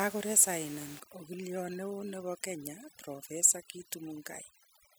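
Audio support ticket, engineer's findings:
Overdone noise removal from 1.00 s to the end. Background drops and breaks up into twinkling specks. Denoiser set too hard, muting bands near its noise estimate and taking quiet speech detail along. Room noise sits about 17 dB under speech before that.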